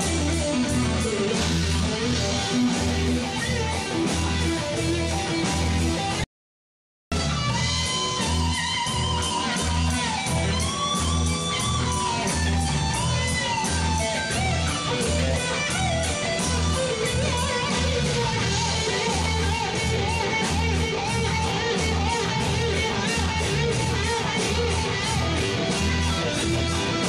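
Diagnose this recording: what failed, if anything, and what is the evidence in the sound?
The sound cuts off abruptly at 6.24 s and returns mid-flow at 7.12 s, leaving 0.88 s of silence with no room tone. This audio dropout to silence likely arose at the input stage: the signal was lost while the recorder kept writing zeros.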